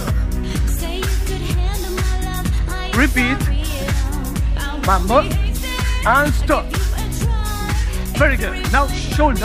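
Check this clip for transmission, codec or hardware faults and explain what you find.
Nothing stood out on listening to the clip.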